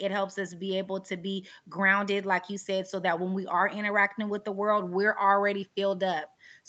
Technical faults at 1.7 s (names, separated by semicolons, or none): none